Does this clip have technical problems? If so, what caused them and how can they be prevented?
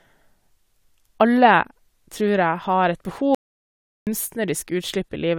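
Yes. At 3.35 s the speech cuts to an audio dropout to silence, with no room tone, until 4.07 s, losing about 0.72 s. The likely cause is a momentary loss of input, such as a loose connection or brief mute. Secure cables and monitor input levels while recording.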